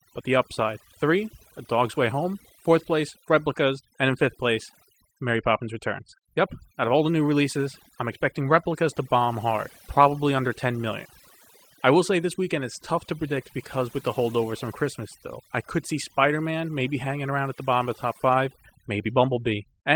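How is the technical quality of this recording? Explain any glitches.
The main problem is overdone noise removal, heard throughout: the reducer switches off bands near its noise estimate, leaving near-silent gaps with twinkling specks. The light Opus coding underneath isn't to blame.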